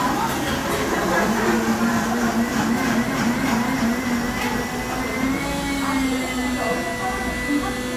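No technical faults are audible.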